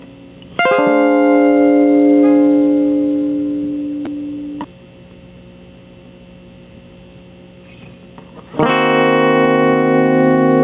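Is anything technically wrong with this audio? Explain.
Yes. Gain pumping runs through the whole music clip. The level swings by around 15 dB. The likely cause is input gain set far too high, with a fast limiter or compressor clamping down on each peak and releasing afterwards. Loud and soft moments end up squashed close together. On a waveform the envelope looks flattened, with the quiet stretches bulging upward between hits. On a spectrogram the low-level background brightens between peaks and darkens under them. The audio has also passed through a narrowband call path with nothing above 4 kHz, consistent with G.711 A-law at 64 kbps.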